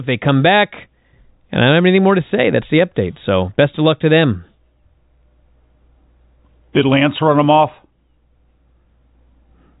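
No technical faults can be heard anywhere in this speech clip.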